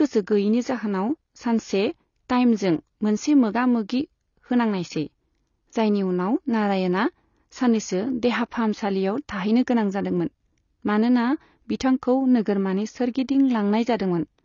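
From start to end the speech has no content above 6.9 kHz, and the remaining band sounds dull and smeared, with a warbling, fizzy texture on sustained sounds and sibilants. The likely cause is AAC compression: an AAC-LC encoder short of bits has dropped its upper band and quantised the rest coarsely against its hearing model, leaving gaps that shift from frame to frame. The damage is plainly audible and fits a bitrate around 24 kbps.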